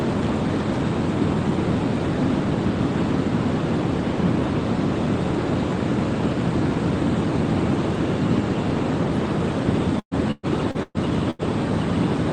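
From 9.99 to 11.42 s, repeated packet loss (robotic sound): five holes, the longest about 119 ms, each patched by stretching the preceding audio, so about a third of the stretch is concealment. It sounds choppy, and shows as smeared, repeated spectrogram frames below the call path's 12 kHz ceiling.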